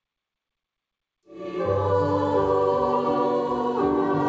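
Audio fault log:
No faults heard anywhere in this recording.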